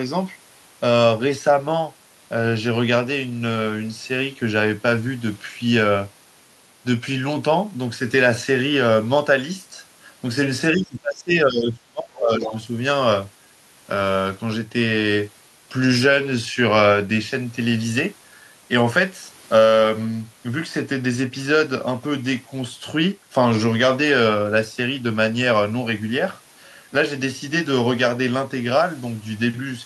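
From 10.76 to 12.55 s there's speech suppressed in double talk: the level dips by up to about 25 dB, likely because the echo canceller clamped down while both sides talked. Right at the tail, from 12.43 to 12.58 s, the other side's voice leaks through as a brief scrap about 10 dB below the talker, likely residual echo the canceller missed.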